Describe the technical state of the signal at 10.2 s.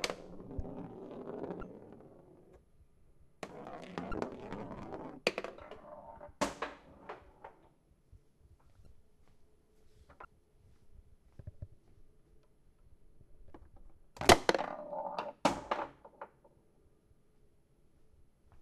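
Damaged data in the compressed stream hits at 10.22 s and lasts about 34 ms, to 10.25 s. At that point the encoded bytes no longer make sense to the decoder. It misreads or discards the affected frame, loses its lock on the frame structure, and scans forward for the next valid header before resuming. The result is a short burst that doesn't belong to the sound: a quick chirp, squawk or blip cutting through the audio.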